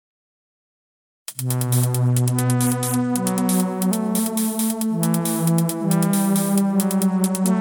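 From 2.08 to 3.54 s, and again from 7.10 s to the end, the music shows a Bluetooth SBC bit pool drop. A congested link starved the encoder, which fits a fall to about 90 kbps. Treble dulls and gritty noise rises, without the gaps of dropped packets.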